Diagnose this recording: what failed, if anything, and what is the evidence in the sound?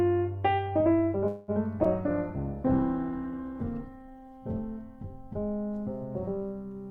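Between 1.27 and 1.51 s the sound stops moving forward and the last moment is carried on as a fading buzz or hiss for about 206 ms. No silence appears, and nothing seems lost when the sound resumes. This is a call audio freeze, likely caused by packets held up on the network until the jitter buffer ran dry. On a spectrogram the last spectrum smears into a decaying band, then normal texture returns with everything shifted later.

At 1.84 s there is a skip ahead. Around 70 ms of sound is missing, and the two sides are joined across a bridge of only about 8 ms. Either a network loss or a jitter-buffer overflow threw away audio while later audio was already queued, which pulled the timing back by roughly 50 ms. In the waveform, the envelope changes abruptly at that point with no gap. A spectrogram shows a hard vertical seam where the harmonic patterns fail to match.

A call bitrate drop starts at about 1.84 s and lasts until 4.49 s. 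The codec rate falls from 96 to 14 kbps and stays at the bottom for about 2.55 s. This is a codec stage reacting to a falling bandwidth estimate. Coarser coding makes the sound rough and watery, and at this rate the upper frequencies are cut. On a spectrogram the top of the band empties and the remaining detail looks blocky, then full bandwidth returns after 4.49 s.

From 3.12 to 3.55 s, a jitter buffer slow-down stretches the sound to 92 percent speed by adding 42 ms. Pitch stays the same, but sounds are drawn out, because the receiver repeated single pitch periods or pieces of pauses to rebuild its reserve. A waveform would show runs of nearly identical cycles. A spectrogram would show the same harmonics held longer than expected, with no shift in frequency.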